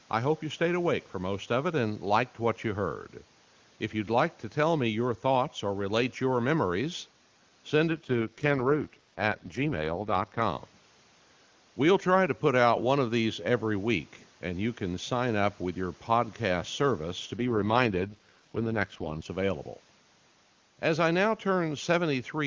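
AMR rate drop at 7.89–10.42 s and again at 17.36–19.26 s. The network switches the codec to a lower mode, which fits about 6.6 kbit/s, and spends the saved bits on protecting a weak radio link. Speech turns rough and synthetic with no gap or narrowing.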